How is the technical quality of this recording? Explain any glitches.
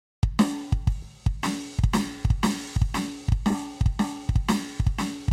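The music has two brief glitches, both repeated frames. At 1.02 to 1.05 s a 30 ms block plays twice, and at 3.50 to 3.54 s a 40 ms block does the same. A run of compressed frames was duplicated, so the decoder replays it and the piece lengthens slightly. It sounds like a quick stutter. On a waveform or spectrogram, the same short pattern sits twice back to back.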